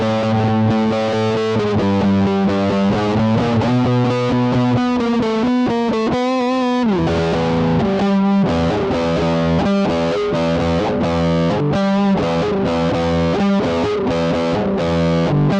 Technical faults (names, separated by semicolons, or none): none